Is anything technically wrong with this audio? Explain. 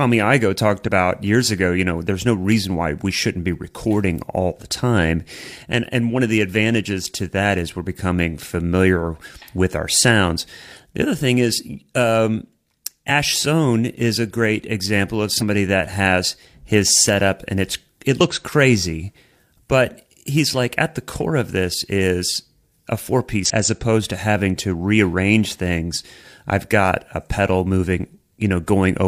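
Yes. The speech has damaged data in a compressed stream at 0.84–0.89 s, 15.38–15.43 s, 18.16–18.21 s and 23.46–23.51 s. At each point some of the encoded bytes arrived corrupted, so the decoder could not read those frames properly and lost its place until it found the next valid frame header. Each spot lasts only about 50 ms and comes out as a short chirp, squawk or blip that breaks the speech.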